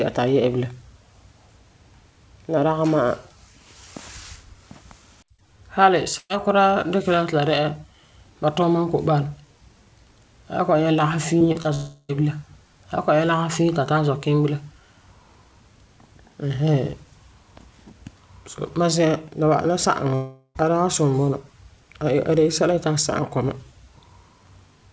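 At 6.18 to 6.31 s a held buzz or hiss fades briefly into about 30 ms of silence before the speech jumps ahead. This is a burst of packet loss: about 120 ms never arrived, and the receiver stretched the last sound to fill it.

Quick smears or wobbles at 11.39, 11.52 and 11.62 s, each a few hundredths of a second, mark short concealed packet loss. Around 20 ms was missing each time and patched by continuing the preceding sound.

From 11.74 to 12.11 s, and again from 20.15 to 20.57 s, a fading buzz or hiss stands in for the speech. The second ends in about 60 ms of silence before the audio resumes further on. The likely cause is a long network dropout losing roughly 340 and 400 ms respectively, all heard through the G.722 call path, with nothing above 8 kHz.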